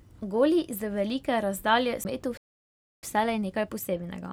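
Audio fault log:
2.04 s, CD skip: the laser jumped to another turn of the disc's spiral, giving a very brief mute of about 10 ms, a tick, then speech resuming from a different point.
2.37–3.03 s, playback stall: the player likely ran out of data or had its thread blocked, so the speech stops mid-flow for about 0.65 s of silence.
3.03–4.33 s, time-compressed catch-up: to clear the backlog, small pieces are cut out and cross-faded, so the speech runs about 1.15 times fast at normal pitch.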